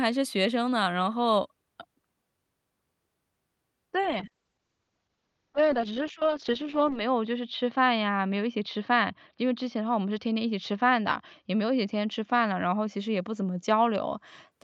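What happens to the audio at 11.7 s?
At 11.7 s the audio is inside a call bitrate drop that runs from 4.04 s to about 14.57 s. The connection's bandwidth estimate fell, so the Opus encoder was pushed to a much lower rate, about 8 kbps compared with 32 kbps, and held there for roughly 3 s at its worst. It codes the speech coarsely and cuts the top end from about 20 kHz to 8 kHz, so the sound turns muffled and rough.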